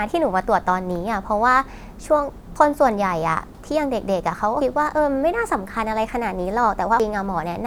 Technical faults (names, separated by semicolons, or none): dropped buffer (overrun)